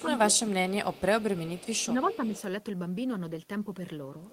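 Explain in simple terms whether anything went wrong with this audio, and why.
Twice the voice gets turned down, from 0.02 to 1.1 s and again from 1.87 to 2.34 s. This is speech suppressed in double talk. The echo canceller was most likely confused by both sides talking at once. Unlike a plain dropout, the voice dips rather than vanishing, clearly in the first stretch and only slightly in the second.

A faint delayed copy of the voice also comes back about a third of a second late. You hear it in short scraps at 0.35 and 0.92 s, then for a longer stretch from 1.21 to 2.42 s. This is echo leak, likely from a loudspeaker echo the canceller failed to remove. It is a real repeat of the voice, not reverb smearing it.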